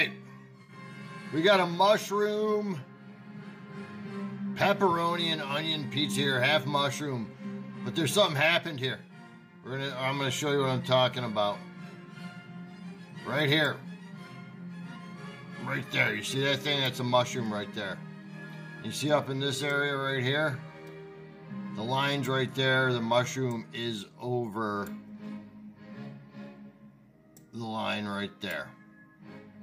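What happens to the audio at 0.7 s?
AAC frame loss with concealment runs from 0.62 to 0.73 s. About 64 ms of coded audio went missing, which fits three dropped frames. The decoder patched the gap from the last good spectrum, leaving a brief smeared, noisy, phasey patch.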